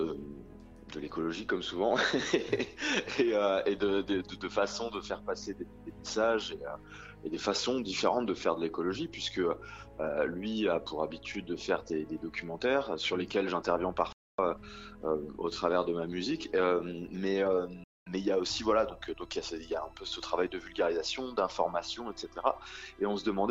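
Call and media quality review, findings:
Digital broadcast dropout at 14.12–14.39 s. Audio fades to silence within about 3 ms and returns after 0.26 s. Receiver muting on missing or failed-checksum frames. Gap fits roughly eight 32 ms frames. Audio in the hole is lost.

Digital broadcast dropout at 17.84–18.07 s. Same fast fade, then 0.23 s of silence. Fits about seven lost frames before good frames resume. Nothing recovered.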